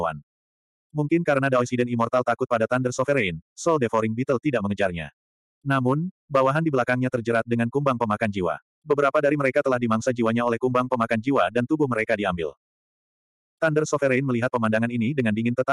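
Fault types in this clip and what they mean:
No faults can be heard.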